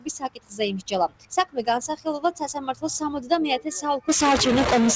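Throughout the clip the level pumps and thins, with held sound sinking and sharp onsets passing, a swing of around 15 dB. A noise suppressor applied to music or sounds, built for speech, is mistaking steady tones and decaying tails for noise and turning them down.

From 0.24 to 0.6 s the sound drops away by up to about 16 dB, and again from 1.08 to 1.6 s by about 16 dB. From 2.57 to 2.83 s it dips by about 12 dB. Each is sound cut by the noise suppressor: sustained or fading material is judged to be noise and attenuated harder than the rest. Throughout, nothing is heard above 8 kHz, which fits a G.722 call codec on the call path.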